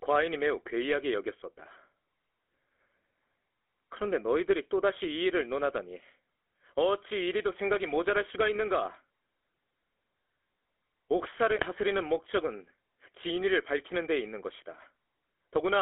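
From start to finish the speech passes through the GSM full-rate codec, and its damage is plainly audible. The encoder reduces the voice to a vocal-tract filter driven by a sparse, regularly spaced pulse excitation, which gives every voiced stretch a buzzy, gravelly grain, consistent with the 13 kbps full-rate coder. Only about 300 Hz to 3.4 kHz survives. On a spectrogram the energy stops sharply at that band edge, and harmonics look smeared and grainy rather than cleanly striated.

Between 11.56 and 11.63 s, GSM bit errors corrupt the decoded speech. Flipped bits in the filter, pitch or gain parameters briefly garble the sound into a short squawk and gargle, a span that fits about four 20 ms frames. In the waveform this burst shows up as a jagged, abruptly jumping envelope. On a spectrogram the formant pattern breaks into blocky, misplaced bands for that instant before normal coded speech resumes.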